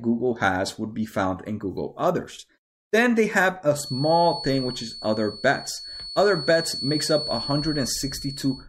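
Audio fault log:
3.70–8.68 s, feedback whistle: just after "they have", a thin, steady tone at 4.4 kHz appears behind the speech and holds to the end of the clip, sitting roughly 10 dB below the voice and swelling and fading slowly in level. The likely cause is a loudspeaker-to-microphone loop balanced right at the edge of feedback, so that single frequency keeps sustaining itself without building into a runaway howl.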